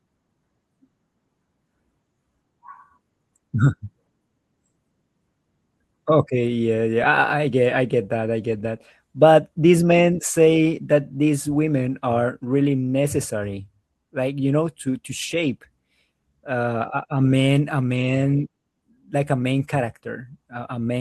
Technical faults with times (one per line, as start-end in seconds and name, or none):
none